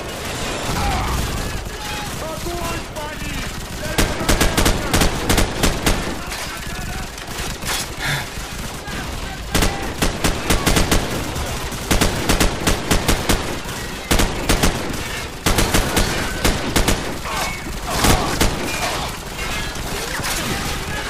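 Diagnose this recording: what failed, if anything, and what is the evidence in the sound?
Nothing stood out on listening that would point to a failure at any stage of the chain.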